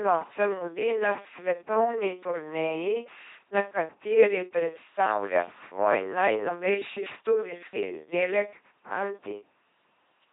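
Throughout, the speech has the heavy damage of an LPC-10 vocoder, which fits 2.4 kbit/s coding. A small filter shapes either a buzzing pulse train or noise. The voice sounds robotic, with stray buzz and hiss. Nothing remains above 3.8 kHz.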